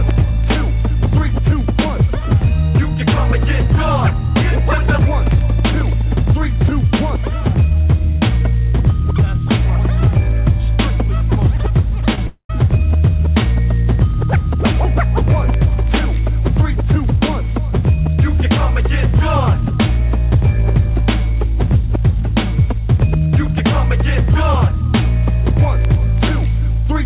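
At 12.15 to 12.18 s, a short concealed packet loss occurs: about 10 ms of the stream arrived too late for the decoder, so the receiver synthesised roughly 20 ms of replacement sound by extending what had just played, then crossfaded back into the real signal. What reaches the ear is a tiny smear or wobble, brief enough that it reads as a slight blur in the audio rather than a gap.

From 12.27 to 12.5 s comes a long network dropout, most likely the connection stalling so that no packets got through for about 230 ms. The receiver first stretches the last sound into a fading buzz-like continuation for around 220 ms, and roughly 100 ms of near-silence is heard before the real audio resumes further on, with the missing stretch simply gone. The whole clip also shows no content above 4 kHz, which fits a G.711 mu-law call codec.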